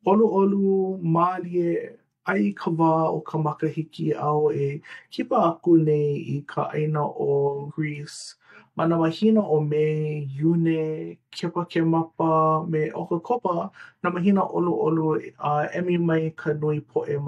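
At 7.66 s and 13.33 s the speech jumps ahead: compressed frames skipped, about three 42.7 ms frames (roughly 150 ms) and then one. Unlike a dropout, there is no silence; the audio simply jumps ahead by the missing frames.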